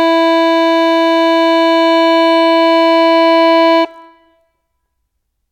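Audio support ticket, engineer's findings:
Engineer's findings: no faults found in the music audio on this support ticket.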